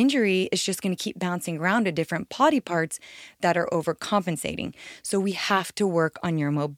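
Speech recording with no audible technical faults anywhere in the clip.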